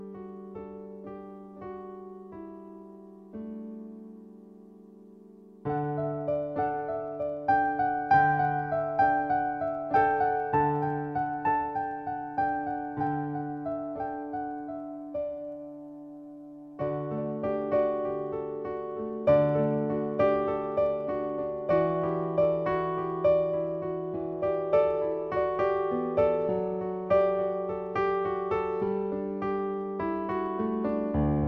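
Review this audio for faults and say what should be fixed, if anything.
Unsynchronised device clocks, likely about 300 ppm apart, slip one sample roughly every 70 ms from 0.15 to 31.47 s, causing clock slip clicks, a soft steady rattle. Lock both devices to a shared word clock, or put an asynchronous sample-rate converter between them.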